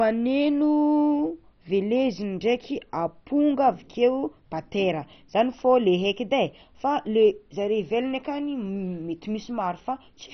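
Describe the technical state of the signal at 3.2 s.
At 3.2 s the speech carries MP2 compression damage present throughout the clip, likely from very low-rate MPEG Layer II coding around 32 kbps. Too few bits leave upper sub-bands switched off and the rest coarsely quantised, so the voice sounds dull and gurgly. A spectrogram shows a hard ceiling near 6.1 kHz with flickering blocky bands below.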